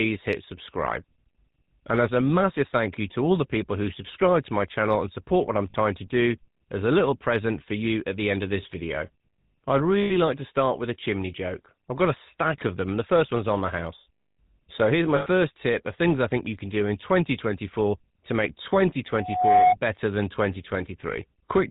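From start to finish the speech carries GSM full-rate codec damage, plainly audible. The codec models the vocal tract and excites it with a sparse, regular pulse train. It discards most of the fine detail. The result is a buzzy, gravelly roughness on every syllable. Nothing survives above 4 kHz, so the sound is dull and narrow. The grain and bandwidth point to the 13 kbps full-rate mode.

At 5.70 s there is a short dropout of about 40 ms. At 10.02 s a longer one lasts about 80 ms. At 15.16 s the longest runs about 100 ms. These are lost GSM frames. The decoder fills each gap by repeating the last good frame. Each gap is heard as a brief metallic ring rather than silence. The 40 ms gap fits two missing frames, the 100 ms gap five. None lasts long enough to fade fully out.

At 19.12 s a loudspeaker feedback squeal appears. A microphone is hearing its own loudspeaker, and at 729 Hz the loop gain exceeds one. 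That single tone feeds on itself. It swells over roughly 0.4 s, ending up about 10 dB above the speech. It ends at 19.76 s.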